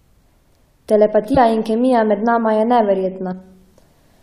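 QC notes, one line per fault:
1.34–1.38 s and 3.31 s, compressed frames skipped: the speech lurches forward, losing about 50 ms and then about 70 ms. Whole coded frames went undecoded.
3.05 s to the end, video or display buzz: a faint 75 Hz buzz with a fizzy hash above it sits beneath the speech, roughly 45 dB down. A screen or video cable is coupling its field-rate interference into the audio path.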